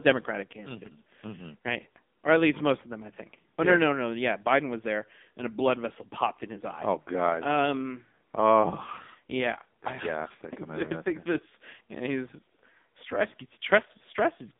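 From start to finish the speech carries AMR narrowband mobile codec damage. Only about 200 Hz to 3.6 kHz survives, so it sounds thin and boxed-in, with a heavy buzzy, synthetic edge that fits a low mode near 6.7 kbps. Spectrograms show nothing above 3.6 kHz.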